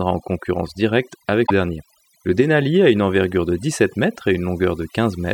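A noise reduction stage set far too aggressively runs across the whole recording. It treats any frequency band that sits close to its noise estimate as something to remove, pulling those bands down hard or cutting them entirely, and the quieter components of the speech fall below that line along with the hiss. This is overdone noise removal: the background drops to near silence dotted with twinkling specks.

From 1.43 to 1.51 s, the compressed stream carries damaged data. Bytes in that stretch of the file are corrupted, so the decoder misreads the affected frames or rejects them, loses its place in the stream and has to hunt for the next valid frame header before normal decoding resumes. The result is a short chirp, squawk, click or hole lasting about 80 ms, before the audio picks up again.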